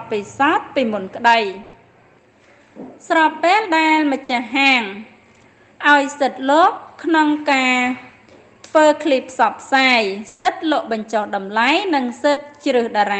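At 1.63 s the sound smears into a brief held buzz or hiss that fades over about 100 ms, then jumps ahead to 1.76 s with roughly 80 ms of material gone. The same happens more briefly at 4.24 to 4.32 s and at 12.32 to 12.44 s, each with about 50 ms of fading fill and about 40 ms skipped. These are bursts of packet loss: consecutive packets never arrived in time, so the receiver kept extending the last sound while turning it down, then resumed further along.

Between 10.28 and 10.48 s a longer fill stretches the last sound for about 170 ms, fading as it goes, and never drops to silence before the audio returns with roughly 160 ms missing. This is likely a long network dropout, where nothing reached the receiver for that stretch. The concealment carried the sound through the gap on its own, and the lost portion was never played.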